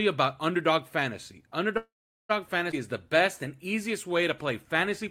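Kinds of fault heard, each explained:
Call audio freeze: at 1.77 to 2.31 s the speech halts for about half a second. The last sound is stretched out and decays, leaving roughly 0.41 s of silence, and then the talker resumes exactly where they stopped, so nothing is lost and the call now runs about 0.52 s later. The likely cause is packets stalling in transit until the jitter buffer emptied and the receiver had to fill the wait itself.
Skip ahead: at 2.71 s, just before "is the", playback jumps forward with only a 13 ms join. Roughly a tenth of a second of speech is gone, and the two sides butt together almost directly. Audio behind it was already queued, so dropping that stretch in transit or in an overfull jitter buffer let the receiver close the gap, pulling the delay back by about 100 ms.
Jitter buffer slow-down: from 3.17 to 4.44 s, after "is the", the speech runs at about 95 % of normal speed without any change in pitch. 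The receiver repeated single pitch periods and slivers of pause over and over to add about 65 ms of material and rebuild its reserve. The result is slightly drawn-out sounds across that stretch rather than any audible gap.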